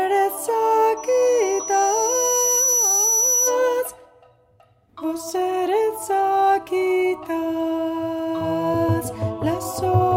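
A piercing tone near 5.9 kHz swells over about a second and a half from 0.97 s to roughly match the audio, then stops at 3.6 s: loudspeaker feedback squeal, where the microphone re-amplified its own loudspeaker output.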